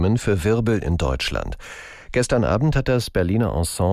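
A slow flanging sweep runs through the whole speech recording. It comes from the channels drifting apart: each side was captured on a separate clock, and with the clocks differing by a few tens of parts per million, the delay between them creeps steadily, reaching only about a tenth of a millisecond by the end. That sliding offset drags the comb-filter notches gradually across the spectrum.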